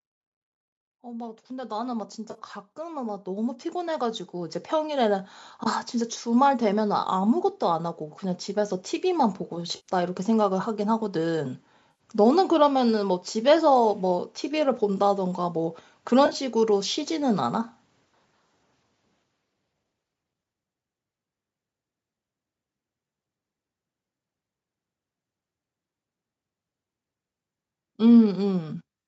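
A speech clip with two kinds of fault. The first is automatic gain rising. From 0.88 s to 5.36 s the level climbs steadily, by about 16 dB in total. The voice and the background noise swell together, which points to a gain control lifting a signal it judged too quiet. The second is AAC frame loss with concealment, which sounds like a smeared, noisy patch in place of the lost audio. It happens four times: 40 ms at 2.31 s, 90 ms at 9.76 s, 80 ms at 11.91 s, and 50 ms scattered over 80 ms at 16.26 s, where the gaps are short, around 20 ms at most. The decoder fills each gap from the last good spectrum, so the sound turns hazy rather than dropping out. The gap lengths fit the 10 ms frames of the low-delay AAC stream that is likely carrying this call. Nothing is heard above 8 kHz.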